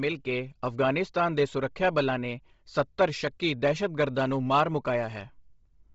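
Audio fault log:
throughout: Bluetooth LC3 compression, likely. Heavy grainy, breathy edge on the speech; the spectrogram shows a hard ceiling at 7.7 kHz and noise-filled upper bands, which fits a 24 kbps stream.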